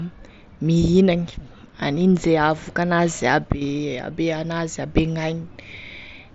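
Nothing goes wrong anywhere in this speech clip; it simply comes over the wideband Bluetooth mSBC headset link, so it tops out around 8 kHz, as that path does.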